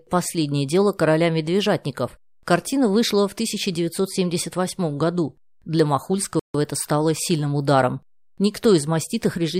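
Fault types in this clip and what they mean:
Playback stall: the speech cuts out in mid-flow at about 6.39 s and stays silent for roughly 150 ms, then picks up again with "это стало сильным ударом". That gap points to the player running dry or having its thread held up for a moment, most likely a buffer underrun, so nothing reached the output until it caught up. It's short but clearly audible as a hole in the sentence.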